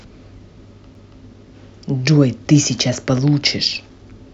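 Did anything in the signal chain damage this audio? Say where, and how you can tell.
Yes. A CD skip at 0.95 s damaged this speech at the playback stage. There is a very brief mute of a few milliseconds, and then the speech resumes from a different point, so the flow is broken rather than merely interrupted. The disc player's laser was knocked or hit a flaw and lost its track. It landed on another turn of the spiral, so the player briefly silenced its output and continued reading from there.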